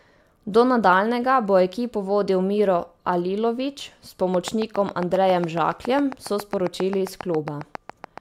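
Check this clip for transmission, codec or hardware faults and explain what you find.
One hardware-type fault is present: a train of clicks from 4.3 s to the end at 8.2 s. About thirty near-identical pulses arrive at a regular 7.3 per second, peaking around 10 dB above the speech. They are likely interference or a struggling interface. They sound like steady ticking, audible in pauses too. A spectrogram shows evenly spaced thin vertical lines, and the waveform shows sharp spikes.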